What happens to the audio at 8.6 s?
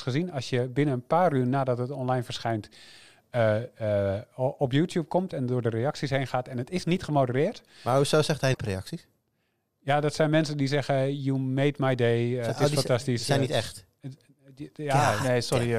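Right around 8.53 to 8.57 s the audio skips ahead with a brief garbled glitch, likely a broken MP3 bit reservoir, where frames after a cut borrow the wrong bytes.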